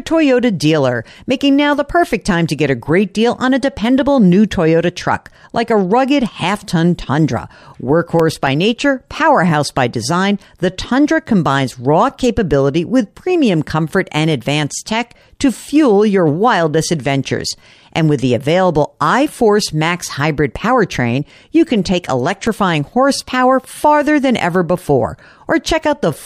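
CD scratch ticks at 8.20–8.74 s and again at 22.34–22.88 s: each is a quick run of five clicks of uneven strength, a few milliseconds long, through the speech. They happen where a disc blemish wiped out more data than error correction could rebuild on successive turns, so the player patched or muted those samples.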